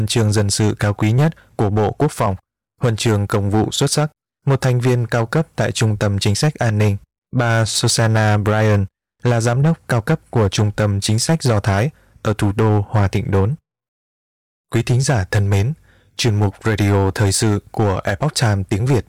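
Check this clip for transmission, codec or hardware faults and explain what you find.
One fault runs through the whole clip: hard clipping. From start to finish, louder moments of the speech carry a harsh, gritty fuzz. The signal is driven about 9 dB past what a stage can pass, so roughly 7 percent of samples are sheared flat, and those flattened peaks spray high harmonics across the spectrum.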